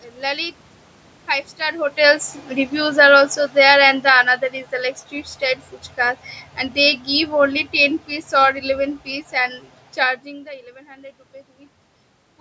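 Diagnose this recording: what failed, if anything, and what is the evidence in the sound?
Automatic gain falling in the call processing: the gain control judged the input too loud, or its background noise too strong, and lowered it gradually, by about 7 dB from 1.93 to 4.35 s and about 4 dB from 5.99 to 9.61 s. Speech and room noise sink together.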